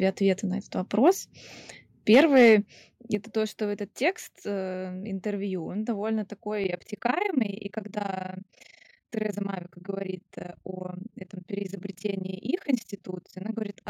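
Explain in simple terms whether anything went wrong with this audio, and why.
Between 2.12 and 2.54 seconds the loudest part of the speech turns harsh and crackly, as if it were breaking apart. This is microphone overload. The microphone was likely set too sensitive, so the strongest peaks went past the highest level the converter could handle and their tops were sliced flat. Those flattened peaks are what add the rough, gritty edge to the sound.

Near the start of that distorted stretch, at 2.15 seconds, the whole recording gets a little quieter all at once. At 3.15 seconds, just before "то что этот текст", it drops again, this time much more noticeably. This is the microphone volume being stepped down. The calling software likely noticed the overloaded input and turned the microphone's level down in two separate jumps rather than smoothly.

From 6.64 seconds, right after "он довольно", to the end of the clip, the sound develops a fast, rough flutter, like a robotic tremble running through it. 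This is overlap-add ripple. The audio was processed in long overlapping chunks and then joined back together. The chunks were not blended evenly, so the loudness pulses up and down about 30 times a second, once for each chunk.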